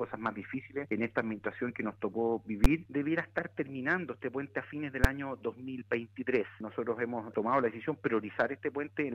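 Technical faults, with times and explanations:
2.64 s and 5.04 s, invalid numbers at full scale: two sharp bangs, each a short block in which the output jumps to the largest possible value. A calculation produced infinite or invalid numbers, which were clamped to full scale, roughly 12 ms at 2.64 s and 6 ms at 5.04 s. The lengths fit a 512-sample block and a 256-sample block. Each run is too brief for separate onset and release pops, so each lands as a single loud bang.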